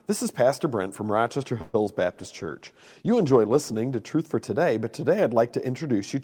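At 1.61 s the speech stalls for about 123 ms, to 1.76 s: the last sound is drawn out as a fading buzz rather than dropping to silence. This is a call audio freeze, likely from packets held up in transit so the jitter buffer ran dry. Unlike packet loss, nothing is missing. The speech resumes exactly where it stopped, now running about 123 ms later.

Just after, from 1.86 to 1.89 s, comes a short concealed packet loss. About 20 ms of real audio never arrived, and the receiver patched the hole by extending the preceding sound before blending back. It is heard as a brief smear or wobble rather than a stretched pause, and here some speech is genuinely gone.

From 2.09 s to 3.86 s a call bitrate drop takes the encoder from 40 to 17 kbps, holding the lowest rate for about 1.68 s. The speech turns rough and watery for that whole stretch, then clears. What sets it apart from the two dropouts is that it is a sustained loss of quality rather than a momentary break in the audio.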